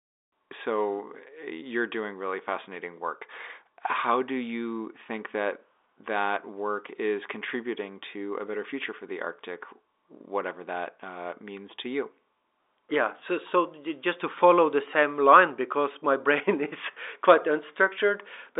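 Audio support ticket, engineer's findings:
No faults found; speech sits in a telephone band consistent with G.711 mu-law coding, roughly 250 Hz to 3.7 kHz, with nothing above 3.8 kHz, as expected for that format.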